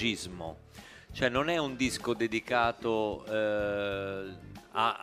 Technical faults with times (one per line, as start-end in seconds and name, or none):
none